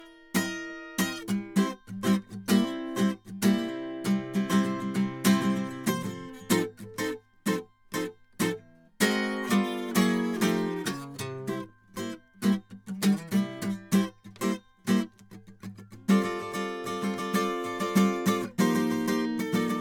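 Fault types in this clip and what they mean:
Generation loss: the music sounds swirly, smeared and hollow, with soft attacks, likely from repeated MP3 re-encoding at around 130 kbit/s, maybe seven passes, stacking up artefacts.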